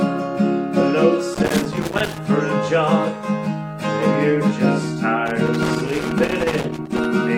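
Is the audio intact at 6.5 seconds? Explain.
No. At 6.5 seconds the audio is inside a stretch of loose connector crackle running from about 5.27 to 7.05 s. A worn or dirty contact is making and breaking as it moves, so the signal is chopped on and off, and any DC on the line turns each break into a pop. The result is a ragged, scratchy burst. Unlike buffer-underrun clicks, which recur at a steady spacing, these breaks are irregular in timing and density.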